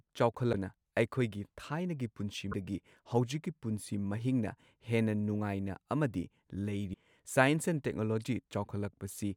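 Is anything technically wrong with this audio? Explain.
Yes. There are three brief glitches in the speech: at 0.52 to 0.55 s, at 2.51 to 2.54 s right after "ꯊꯥꯏꯅꯒꯤ ꯄꯨꯟꯁꯤ", and at 6.93 s. Each is a tiny jump forward, roughly one 24 ms frame long. That's likely a broken MP3 bit reservoir: frames got dropped, so the next frame reached back for borrowed data and decoded someone else's bytes.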